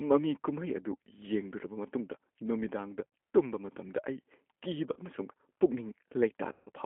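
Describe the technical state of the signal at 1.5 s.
At 1.5 s the speech sounds rough and slightly synthetic, squeezed into a telephone band of 250 Hz to 3.4 kHz. This is G.729 codec damage, present throughout. Each 10 ms frame is rebuilt from a vocal tract filter, pitch predictor and sparse pulses, consistent with 8 kbit/s.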